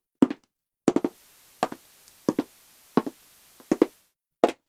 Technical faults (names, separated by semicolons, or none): digital radio blending to analogue